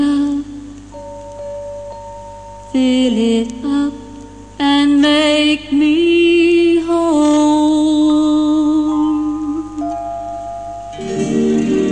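No technical faults can be heard anywhere in the recording; the signal keeps steady continuity and level throughout.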